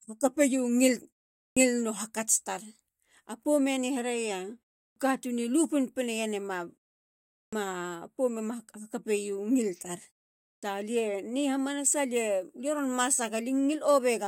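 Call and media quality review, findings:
Clipped start after a pause at 1.49, 4.89, 7.46 and 10.56 s: speech onsets cut abruptly, 66 to 76 ms missing after pauses of 0.34 to 0.76 s. Output device sleeping in silence, waking late.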